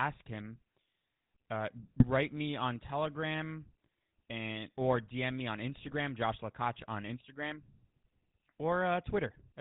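The whole clip carries GSM full-rate codec coloration, nothing above 4 kHz, a buzzy, gravelly roughness from the pulse-driven vocal tract model at 13 kbps. At 1.98 to 2.04 s and again 5.85 to 5.97 s, GSM bit errors corrupt decoder parameters, so the speech squawks and gargles briefly.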